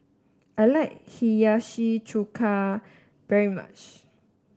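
The clip is speech, and nothing is technically wrong with it.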